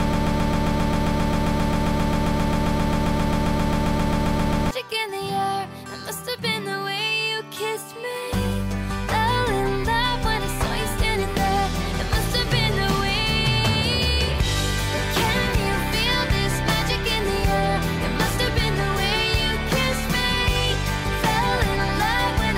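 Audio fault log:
0.00–4.71 s broken-record loop: an identical 133 ms fragment stutters back to back from the first instant, likely a stalled stream resending its last piece.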